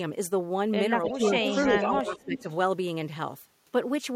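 Sample clock jitter runs through the whole clip: the converter clock is wobbling by a couple of microseconds, so samples land slightly off time. That leaves a faint hiss and roughness, around 40 dB under the speech, which gets stronger on loud, bright sounds and disappears in the gaps.

From 1.05 to 1.98 s there's an echo leak. A copy of the speech comes back about 0.3 s late and only about 10 dB down, likely the far end's echo canceller letting its loudspeaker pickup through. A second, much fainter one follows from 2.18 to 2.56 s with the same delay.

Speech suppressed in double talk shows up at 1.12 to 1.22 s, where the voice dips by around 10 dB, and again from 1.63 to 2.47 s, dropping by up to about 15 dB for most of that stretch. It's likely an echo canceller turning everything down while both sides overlap.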